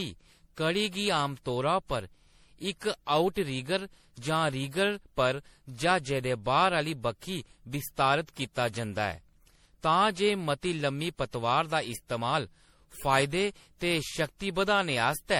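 Generation loss runs through the whole speech clip. The sound is swirly, smeared and hollow, worse than a single 64 kbit/s MP3 pass would account for, with blurred consonant attacks and nothing above 20.5 kHz. This likely comes from repeated MP3 decoding and re-encoding, around seven passes. Each pass quantises again on a shifted frame grid, so the noise and spectral holes from every generation build up.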